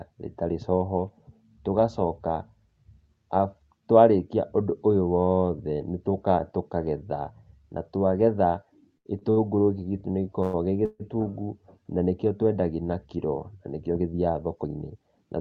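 Short stalls from late packets fall at 8.97 to 9.07 s, 9.19 to 9.23 s and 9.31 to 9.38 s. Each time a packet missed its playout moment, the jitter buffer ran dry and the receiver held the last sound for about 76 ms, 20 ms and 55 ms, then picked up exactly where it left off. Nothing is lost. The speech drags briefly, with a faint buzz or dip in the cluster.

Call audio freezes follow at 10.42 to 10.55 s and 10.85 to 11.02 s, likely from packets held up in transit that emptied the buffer. The receiver carried the last sound forward as a decaying buzz or hiss for about 108 ms and then 144 ms, and the second one thins into roughly 20 ms of silence before the speech resumes from where it stopped. These are inserted pauses, not cuts.

A jitter buffer speed-up runs from 13.91 to 15.03 s. The buffer held more audio than its target, so the receiver trimmed many tiny pitch-period slices in succession, around 150 ms in total. 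The speech plays at 112% speed without any pitch change, sounding rushed. The call path's 8 kHz audio bandwidth, consistent with Opus, can be heard as a top end that stops there.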